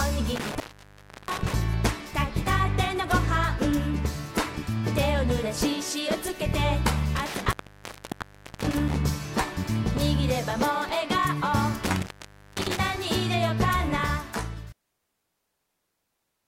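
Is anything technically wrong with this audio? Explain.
Yes. There is an intermittent contact, three times: 0.35 to 1.53 s, 7.16 to 8.96 s, and 11.84 to 12.79 s. A loose cable or plug briefly opens the signal path. The sound breaks up with crackle, then drops out for about 0.68 s, 1.09 s and 0.51 s respectively.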